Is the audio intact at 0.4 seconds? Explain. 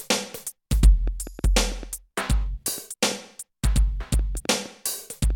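Yes, at 0.4 seconds the audio is intact, with nothing audibly wrong at that moment.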